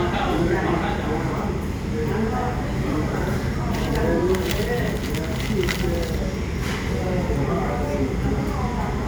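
Compressed frames skipped at 4.51 s: the audio suddenly jumps ahead by around 70 ms, which fits about three whole frames of 26.1 ms each being dropped, either missing from the file or rejected by the decoder as damaged. Because the surrounding frames overlap, the join is a short, smeared blip rather than a sharp click, and a small piece of the sound's progression is missing.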